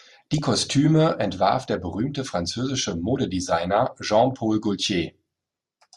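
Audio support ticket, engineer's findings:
Short noise blips over the speech at 0.33–0.38 s and 4.38 s. DAB burbling from weak reception: residual bit errors corrupt MP2 sub-band samples across a few frames.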